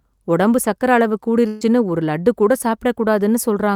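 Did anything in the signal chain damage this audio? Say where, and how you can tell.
Yes. A burst of packet loss hits the network stage at 1.47 to 1.63 s, between "உடம்பு சக்கரை அளவு" and "ஒரு லட்டு கூட". With the packets gone, the receiver stretched the last good audio across roughly 135 ms, fading it so it sounds like a brief held, fading continuation of the last sound rather than silence. Speech then picks up again with about 140 ms of the original missing, so the join skips ahead instead of running on.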